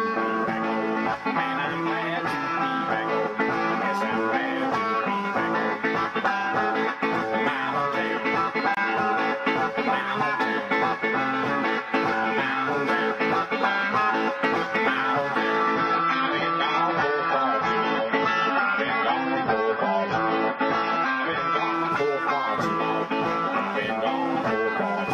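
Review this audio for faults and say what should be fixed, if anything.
From 15.74 s to 21.74 s the audio drops to a lower-bitrate version of an adaptive stream, then returns. The switch is abrupt in both directions with no gap. For those 6 seconds nothing is present above 7 kHz, and codec artefacts rise, which fits a fall from around 96 kbit/s to around 16 kbit/s AAC when the connection slowed. Prevention: give the player a larger buffer and cap how far it may step down, or use a fixed high-bitrate source when capturing.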